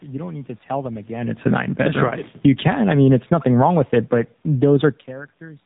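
The whole clip runs through the AMR narrowband mobile codec at 7.4 kbps. Nothing above 4 kHz survives, and the voice comes out plainly buzzy and synthetic.

Right after "to tell them again", from 1.32 to 2.72 s, there's automatic gain falling. The AGC decided things were too hot and eased down about 11 dB, so the speech and room noise sink together until "I mean it's nothing".

Inside that stretch, from 2.18 to 2.32 s, AMR bit errors hit. A few percent of the weakly protected bits flipped across what sounds like about seven frames, which scatters the excitation pulses. Pitch and level hold roughly steady, but the voice turns hoarse and gargly.

After "wrong with it but", from 4.48 to 4.81 s, the gain falls again, this time about 5 dB. It's a quicker, smaller dip.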